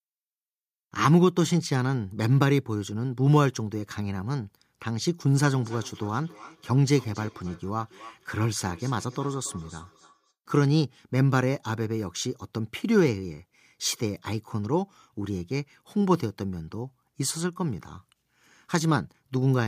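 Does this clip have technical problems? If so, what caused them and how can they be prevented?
Yes. From 5.6 to 10.33 s there is feedback echo between two devices. A second device replays the speech into the microphone, so each phrase returns roughly every 0.3 seconds, peaking about 23 dB below the direct sound. On a spectrogram, faint copies of each syllable trail behind it at even spacing. In the waveform, small repeated bursts follow each louder one. Muting one device's speaker or microphone, or using headphones, prevents it.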